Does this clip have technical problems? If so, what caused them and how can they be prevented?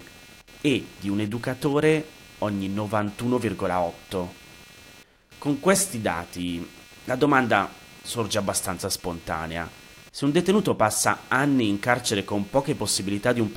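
Yes. Computer activity noise runs throughout: load changes in the computer disturb the ground it shares with the audio circuit, putting a buzzing pulse at around 200 Hz roughly 25 dB below the speech, which rises and falls with the machine's activity rather than the speech. To prevent it, use a USB isolator or an external, separately powered audio interface.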